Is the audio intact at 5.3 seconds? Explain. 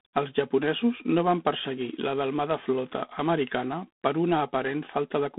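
No. G.726 ADPCM coding runs through the whole clip, so 5.3 seconds is affected too. The codec sends each sample as a few bits describing its difference from an adaptive prediction, and the coarse steps leave quantisation noise riding on the speech. Here that noise is a plainly audible harsh, rasping hiss that rises and falls with the speech level, which fits 24 kbit/s operation. The band is telephone-narrow, about 200 Hz to 3.6 kHz, with nothing above 3.8 kHz.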